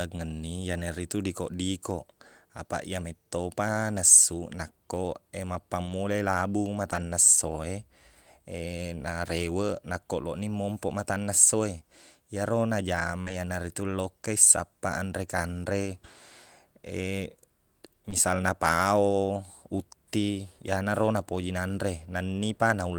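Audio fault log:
5.85–5.91 s, 6.91–6.97 s, 13.26–13.32 s, 18.12–18.14 s: lost packet rebuilt from error correction. Low-bitrate copies fill 40 ms, then 20 ms at 18.12 s. There is no gap, but these stretches sound rougher and noisier, just before "esso e" and "ritu lokka i sappaq".
13.21–13.28 s, 18.10–18.14 s: short concealed packet loss. About 40 ms, then 20 ms, never arrived. The decoder stretched the preceding sound, leaving a brief smear after "matanna esso e iyero".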